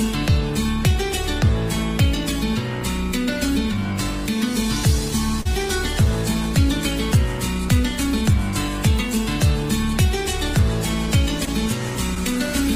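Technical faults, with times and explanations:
5.41–5.47 s, 11.45–11.49 s and 12.15–12.18 s, short concealed packet loss: each spot has a brief smear where the sound briefly wobbles and a short detail can drop out. Audio arrived too late for the decoder, about 40 ms at 5.41 s and 20 ms at the later two. The receiver filled 36, 16 and 10 ms of each gap by extending the preceding sound, then crossfaded back into the real signal.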